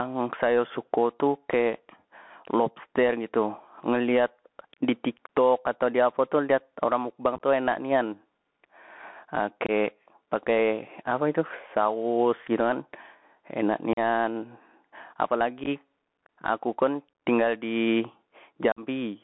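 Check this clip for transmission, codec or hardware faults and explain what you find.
Three faults are present in this speech: gain pumping and a Bluetooth CVSD headset codec throughout, and five bursts of unconcealed Bluetooth headset packet loss.

Gain pumping runs through the whole clip. The likely cause is microphone gain set far too high, with a fast limiter or compressor clamping it down on every loud syllable. The level swings by about 20 dB. Loud and quiet passages end up squeezed close together, giving a flattened, breathing quality.

The Bluetooth CVSD headset codec is also present throughout, and its damage is plainly audible. CVSD codes each sample as a single up-or-down bit, and the sound points to the standard 64 kbps headset link. The band is confined to roughly 200 Hz to 3.4 kHz, so the audio sounds thin and boxy. Loud high-frequency sounds outrun the adaptive step size and distort, s sounds turn scratchy, and a granular hiss sits under the speech.

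Unconcealed Bluetooth headset packet loss occurs at 7.36–7.41 s, 9.66–9.70 s, 13.93–13.99 s, 15.64–15.69 s and 18.72–18.80 s. Short voice packets between headset and phone were dropped, and silence or an idle pattern filled their place with no concealment. Each event cuts between about 19 and 49 ms of audio. The losses at 7.36, 15.64 and 18.72 s are scattered across the span rather than one solid gap. The holes have abrupt edges, and the sound resumes briefly quieter, giving a chopped, crackly roughness.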